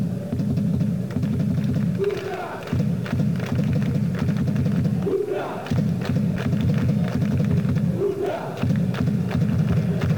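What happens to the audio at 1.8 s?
Nothing goes wrong at 1.8 s: the audio carries straight through that moment with no dropout, click, glitch or other fault.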